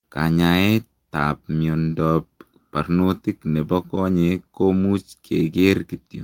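Listening through the speech, nothing stood out as a technical problem at any point.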